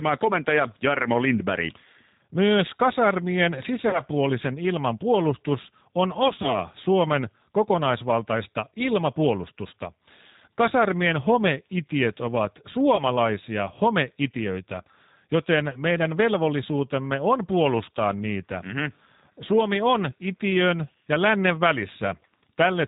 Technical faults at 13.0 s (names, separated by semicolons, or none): G.729 codec; VoIP packet loss concealed by the speech codec